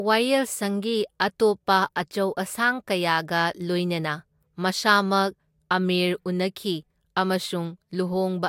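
No technical faults can be heard anywhere in this speech recording. At no point does anything in the signal chain audibly go wrong.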